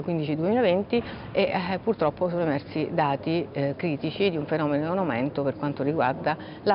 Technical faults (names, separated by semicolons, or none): none